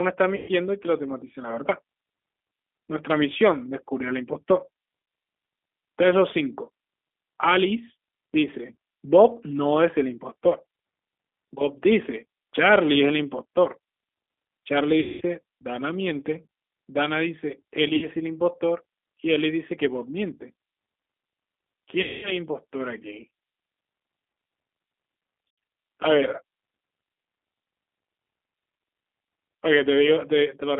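Speech that sounds thin, slightly rough and synthetic throughout, confined to a band from about 250 Hz to 3.5 kHz; this is G.729 codec damage, plainly audible, which fits an 8 kbit/s G.729A stream rebuilding the signal from a filter, pitch predictor and sparse pulses. At 0.36, 15.0, 17.96, 22.02 and 25.49 s the sound smears into a buzzy, fading tone for roughly 60 to 210 ms, with weakened sound lingering just after. This is VoIP packet loss concealed by the speech codec: the decoder stretched its last pitch and filter while lowering the gain.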